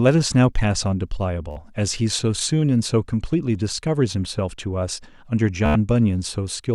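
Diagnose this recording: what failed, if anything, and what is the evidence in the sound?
Bluetooth stutter on the wireless link: at 1.51–1.57 s and 5.66–5.76 s the speech buzzes as the receiver replays its last buffer, then jumps ahead, losing about 53 and 93 ms. That fits roughly four and seven dropped packets. Spectrograms show repeating vertical stripes, and waveforms show identical cycles.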